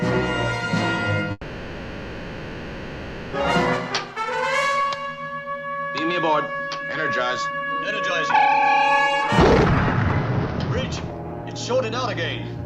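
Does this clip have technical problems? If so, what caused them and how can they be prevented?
Yes. From 1.31 s to 3.35 s the sound stretches into a fading buzz for about two seconds, then resumes with that section lost, likely from a long network dropout. A steadier connection, or a larger receive buffer with retransmission, would prevent it.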